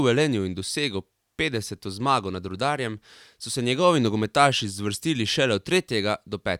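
The speech recording carries no audible technical fault anywhere in its duration.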